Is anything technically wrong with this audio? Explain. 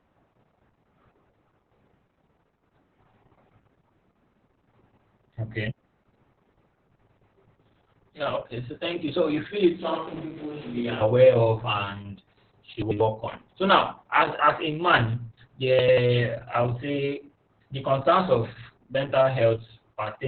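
Yes. Opus voice compression runs throughout the clip. The speech is coded by the SILK linear-prediction coder at a narrowband setting, so nothing above about 4 kHz survives, and the excitation driving the predictor is coded very coarsely. The result is heavily damaged speech that sounds muffled and boxy, with a hoarse, slightly robotic edge. This points to a very low bitrate of roughly 6 kbps.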